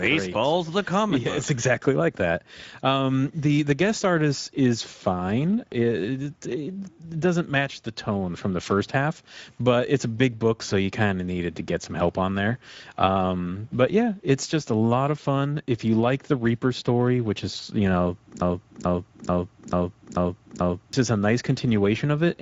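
The clip is speech carrying Speex codec damage throughout. The audio sounds hoarse and grainy, with a noise-like fill in the upper band that fits a wideband Speex stream at roughly 17 kbps. On a spectrogram, energy stops at a hard ceiling near 7.7 kHz, and harmonics above about 4 kHz are smeared into diffuse hash. From 18.42 to 20.93 s, right after "which is you know", a broken-record loop repeats one 0.44 s fragment six times back to back before the audio resumes at "is a nice", with whatever should have played in that gap lost. The likely cause is a stalled player, encoder or stream re-sending its last held buffer. The waveform shows six identical blocks in a row, and the spectrogram shows the same pattern tiled at a 0.44 s period.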